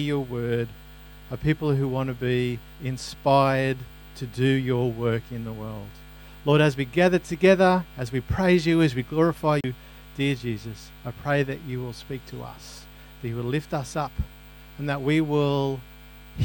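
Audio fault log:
9.61–9.64 s: CD skip, a roughly 30 ms mute as the laser jumps tracks, so playback resumes from a different point on the spiral.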